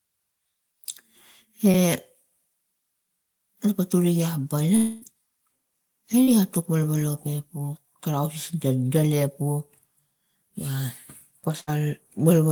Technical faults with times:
1.71-1.75 short concealed packet loss
4.75-5.04 long network dropout
6.24-6.29 short concealed packet loss
11.61-11.69 burst of packet loss

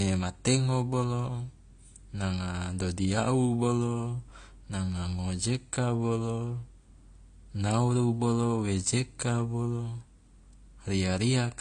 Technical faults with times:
0.00-11.61 AAC compression

